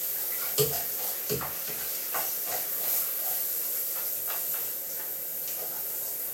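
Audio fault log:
No faults are audible anywhere in this recording of sounds.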